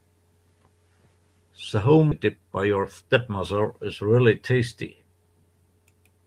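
Speech, with a skip ahead at 2.11–2.13 s: roughly 0.7 s of audio is dropped and the two sides are butted together with no silence in between, so unlike a dropout there is a jump in content rather than a gap. From 2.25 s to 3.10 s a jitter buffer speed-up follows, with speech running at about 107% as short pitch-period pieces totalling roughly 70 ms are cut out to shrink the built-up delay. Pitch stays unchanged, which separates it from a simple playback-rate error, and the speech sounds briefly hurried.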